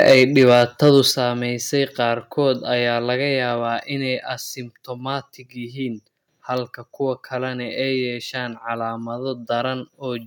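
From the start to 1.0 s, the loudest syllables of the speech carry a harsh, crackling edge. This is microphone overload, likely from an input gain set so high that peaks drove about 7 dB past the converter's ceiling, flattening the tops of a few percent of the waveform. Unlike codec distortion, the grit appears only on the loud peaks and vanishes between them, and quieter parts of the speech stay clean.

At 0.12 s, voice and background together drop by about 2 dB in a single step. At 1.11 s they drop again, this time by about 5 dB. Both are microphone volume stepped down, likely the call software lowering the device's input level after hearing clipped peaks. A fade or automatic gain control would ramp smoothly. Here the whole signal, room sound included, falls at once.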